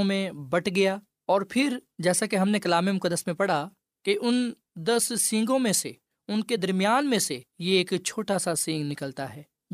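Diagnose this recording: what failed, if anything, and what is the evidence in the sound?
Nothing failed; no fault is audible in this speech.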